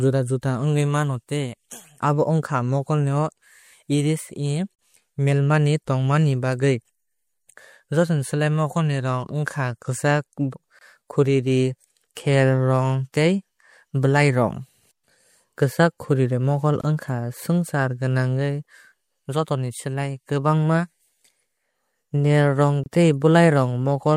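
Gaps at joins of encoded pieces interrupt the speech every 6 s: about 40 ms at 4.75 s, then 24 ms at 10.79, 16.81 and 22.84 s. Untrimmed encoder delay and last-frame padding leave brief gaps with smeared edges before the speech resumes.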